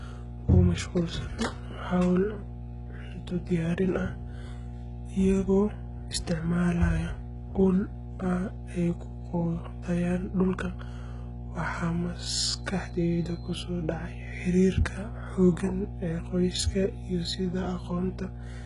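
From start to finish, a steady mains hum sits under the speech at 60 Hz, roughly 10 dB below the speech, picked up from the power line through a ground loop or a nearby transformer. Its fixed pitch and constant level set it apart from rumble or handling noise, which wander.

Also throughout, the treble is heavily damaged and stops entirely above 11.1 kHz. This is likely HE-AAC compression at a very low bitrate, around 12 kbps, where spectral band replication copies lower bands upward instead of coding the real highs. Unlike a plain low-pass, the rebuilt top sounds gritty and lispy, not simply dull.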